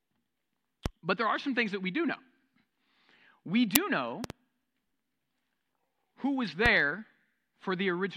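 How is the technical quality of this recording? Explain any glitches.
The recording has clear technical faults: three loud pop events and one crack from an uninitialised buffer.

Loud pops occur at 0.86 to 0.89 s, at 4.24 to 4.33 s, and at 6.66 to 6.69 s. The middle one is two pops in quick succession. Each is a sharp thump sitting on top of the speech, which continues beneath it. The first two peak roughly 15 dB above the speech, and the last roughly 20 dB. The likely cause is a sudden voltage pulse, from a connector, a switch or static, that the downstream circuitry shaped into a brief thump.

The uninitialised buffer fault is at 3.75 s. It is a very short, loud crack lasting about 5.8 ms. Its length fits a 256-sample block. A buffer of that size was sent to the output before any audio had been written into it. The stale memory it held was played as if it were samples. The result is a harsh, noisy click rather than a rounded thump.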